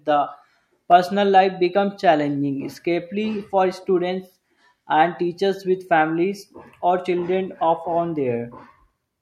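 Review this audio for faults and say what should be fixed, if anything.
At 0.92 s, a block of digital silence appears: the output buffer was likely not filled in time, so about 0.31 ms of samples dropped to zero. The abrupt jump to silence and back produces a brief tick in the speech. Preventing it means giving the audio thread enough buffer headroom and priority so every block is written before playback needs it.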